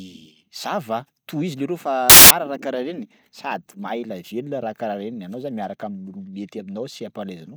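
Samples built from the wrong bytes appear from 2.10 to 2.31 s, where the reader misassembles each sample's bytes, so the rapidly varying low-order bits land in the most significant position. For about 0.2 s the speech gives way to a burst of loud, harsh broadband noise.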